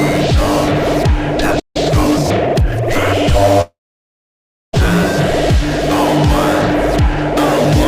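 At 1.59 s a likely playback stall, the player starving or blocked, cuts the sound off mid-flow for about 155 ms before it resumes at 1.77 s. From 1.77 to 2.79 s, time-compressed catch-up drains the backlog by splicing out small pieces, so the audio runs 1.15 times fast at unchanged pitch. At 3.61 s a long network dropout likely stops packets arriving. The receiver stretches the last sound into a brief fading buzz, then holds about 0.98 s of silence. About 1.12 s of audio is lost, and the sound resumes further on at 4.75 s.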